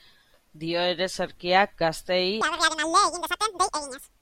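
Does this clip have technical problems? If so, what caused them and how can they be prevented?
Yes. From 2.41 s to the end of the clip at 4.21 s, the speech suddenly turns high and hurried, chipmunk-like, running at twice its recorded speed with the pitch lifted by around ten semitones. This is a section at the wrong speed. Because speed and pitch jump together at one moment, the likely cause is that this stretch was played back or rendered against the wrong clock rate. Keeping sample rates consistent across editing and playback prevents this.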